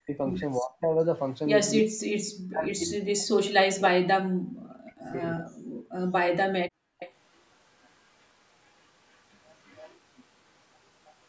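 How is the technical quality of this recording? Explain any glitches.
The recording has clear call-processing problems: the talker is repeatedly ducked, the background briefly drops out, and faint delayed echoes appear later on. The band stops at 8 kHz, which points to a 16 kHz sample rate.

Speech suppressed in double talk, from 0.0 to 0.91 s, 1.82 to 5.52 s and 6.77 to 6.82 s. The talker's level falls by as much as about 40 dB in patches, totalling roughly half a second early on and about three seconds in the long stretch. The likely cause is an echo canceller that couldn't tell the local talker from loudspeaker sound and attenuated everything. On a waveform the envelope caves in abruptly. A spectrogram shows vertical gaps.

Background gated by the echo canceller, from 5.8 to 5.97 s. The room tone is pushed down by about 38 dB for roughly 150 ms and then returns. The canceller clamped the microphone while the far end played and released it afterwards. 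The waveform shows a short flat notch in the noise floor, and the spectrogram shows a brief dark column across all frequencies.

Echo leak, from 6.7 to 7.12 s, 7.84 to 7.89 s, 9.65 to 9.94 s and 11.06 to 11.11 s. A copy of the speech returns 323 ms late at about 15, 40, 25 and 35 dB below the direct sound. This is likely residual loudspeaker pickup that the far side's canceller failed to remove. The spectrogram shows faint duplicated harmonic patterns offset by about a third of a second. On the waveform it appears as a low-level smear trailing the speech.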